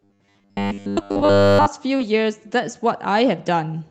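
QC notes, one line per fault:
0.01–1.68 s, robotic sound from repeated short buffers. The sound turns into a rigid, metallic buzz at 100 Hz. That pitch fits a 10 ms stretch replayed over and over, likely because new audio arrived too seldom. Most of the real sound here is skipped.
1.97–2.01 s, short concealed packet loss. 20 ms of audio did not reach the decoder in time. The receiver filled 15 ms by continuing the preceding sound, then blended back into the real signal. It comes through as a brief smear.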